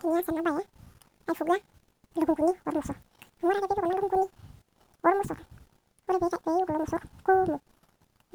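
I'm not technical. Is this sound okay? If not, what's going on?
No. Audio read two samples at a time (double speed), throughout the clip: the player treated each pair of samples as a single step, so the speech runs twice as fast and a full octave higher, 12 semitones up.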